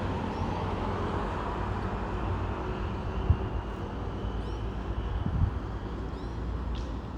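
Nothing stood out on listening to this recording of sounds.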